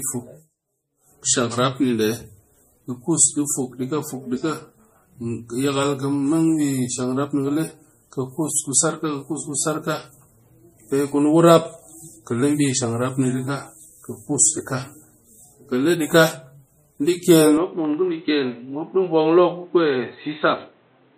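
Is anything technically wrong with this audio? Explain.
Yes, two faults can be heard.

Throughout the clip, the speech carries MP3 compression damage. Nothing survives above 15.2 kHz. The encoder likely ran short of bits, which fits a low bitrate near 40 kbps. Weak frequency lines drop in and out between frames. The result is a plainly audible watery, swirly texture, with smeared consonant attacks.

From 17.57 s to the end at 21.17 s, the sound turns dull and boxy. The likely cause is an input switched to a poorer device. Nothing passes above 4.1 kHz after the change. There is no gap at the switch, and loudness stays about the same. A faint new noise floor appears, roughly 40 dB below the speech.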